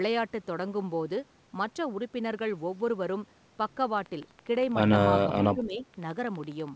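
A speech recording carried over a wideband call path, with no content above 8 kHz, which fits G.722 at 64 kbps. From 3.98 s to the end, a train of clicks runs at a steady 12.2 per second. The pulses have a uniform shape, peak a few decibels above the speech, and tick through the pauses as well as the talking. The regular spacing and fixed shape point to a periodic disturbance, likely interference from nearby equipment or a faulty connection or power supply, rather than anything in the source. Between 5.25 s and 5.86 s the speech is suppressed in double talk. The level dips unevenly for roughly half a second in total, dropping by around 10 dB at its deepest. This pattern fits an echo canceller that, with both ends talking at once, likely could not separate the local talker from the loudspeaker echo and turned both down together.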